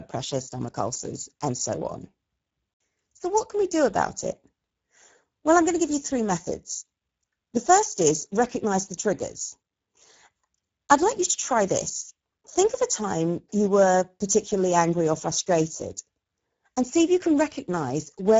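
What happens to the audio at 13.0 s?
At 13.0 s, as throughout, Speex codec damage makes the speech hoarse and noisy from a starved CELP excitation, roughly a 10 kbps setting, with nothing above 7.6 kHz, rather than warbly transform-codec smearing.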